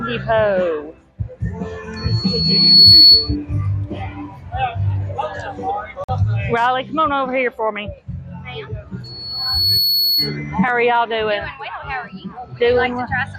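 A microphone is picking up its own loudspeaker, and the loop gain exceeds one at 4.4 kHz. This produces loudspeaker feedback squeal from 1.96 to 3.36 s, building over about a second to roughly 15 dB above the audio, and again from 9.04 to 10.37 s, rising within under a second to a weaker tone about 5 dB above it. At 6.04 to 6.10 s, late packets were likely dropped on the way to the headphones, a Bluetooth dropout that cuts about 46 ms of sound, consistent with a couple of lost frames, before the audio resumes further along.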